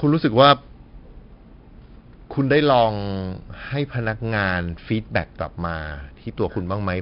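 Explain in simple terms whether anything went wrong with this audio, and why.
The speech sounds gritty and dull throughout, with nothing above 5.3 kHz, because of 4-bit ADPCM compression, which saves each sample as a rough guess, adding hiss.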